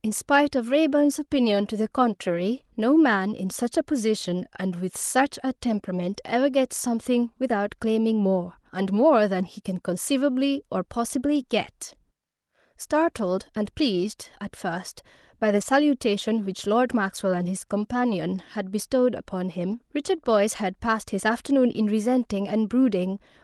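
At 4.23, 11.35 and 15.61 s and 19.71–19.73 s, a lost packet was rebuilt from error correction. A low-bitrate copy filled each 20 ms frame, so there is no gap, only a brief rough, noisier blip. The waveform stays continuous, and the spectrogram shows a grainier 20 ms slice below the call's 12 kHz ceiling.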